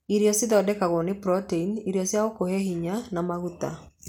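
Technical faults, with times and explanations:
No technical faults are audible in this speech.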